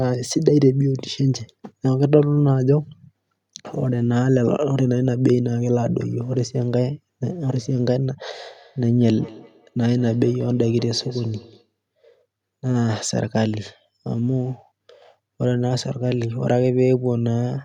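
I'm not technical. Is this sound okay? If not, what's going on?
No. From 8.34 to 11.73 s there's feedback echo between two devices: each word returns about a fifth of a second later, quieter and thinner, unlike room echo's smooth fading.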